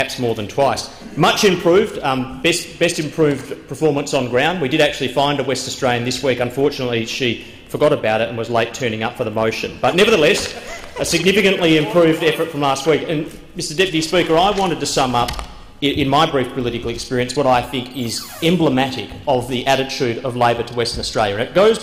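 Hard clipping runs through the whole clip: the signal's pushed about 8 dB past what the stage can pass, so around one percent of samples get flattened into crackle.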